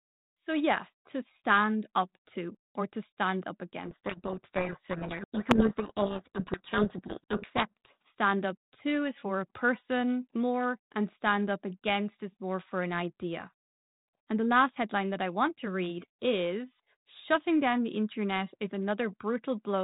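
From 3.84 s, right after "or to stand up", a codec payload misread buries the speech in harsh, grinding distortion until 8.04 s, when clean audio returns on "stand up to is". The decoder is reading G.726 code words with their bit order reversed, so most sample differences it reconstructs are wrong. This differs from the light coding damage of 32 kbit/s G.726 heard across the clip. Here the distortion overwhelms the speech, then stops abruptly.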